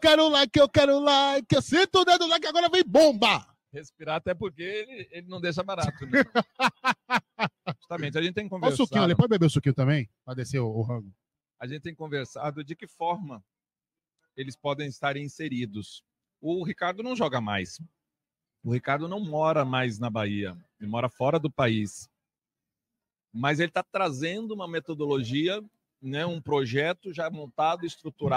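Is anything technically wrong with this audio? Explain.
No, nothing technically wrong can be heard.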